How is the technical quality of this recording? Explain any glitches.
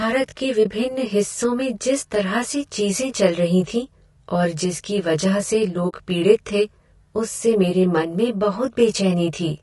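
The technical quality is poor. Three faults are audible: a comb-filtered, rough tone throughout, coarse low-delay codec texture throughout, and two brief dropouts.

Channel delay (comb filtering) runs the full length. One channel arrives roughly 20 ms behind the other, and when the two are summed, the shared content cancels at evenly spaced frequencies, with the first notch at about 20 Hz. With notches that dense, the speech sounds rough and slightly doubled. A 20 ms offset is too short to be heard as a separate repeat, and the coloration stays fixed instead of sweeping the way a flanger would.

Low-delay AAC compression also colours the whole clip. The voice is rough and grainy, with noise filling the gaps between harmonics and a top band that sounds thin and synthetic. This is likely AAC-ELD at a low bitrate around 32 kbps. Its very short frames resolve pitch harmonics poorly, which separates this harshness from the swirly, underwater artefacts typical of longer-frame codecs.

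AAC frame loss with muting occurs twice. The first is from 0.63 to 0.66 s, just before "हिस्सों में जिस तरह". The second is from 5.89 to 5.94 s, between "और जिसकी वजह से" and "पीड़ित थे उससे मेरे". The decoder zeroed the missing frames, and the overlapping windows ramp the signal down and back up. The result is a brief dip of about 20 ms and a soft-edged hole of about 40 ms, fitting one and two lost frames.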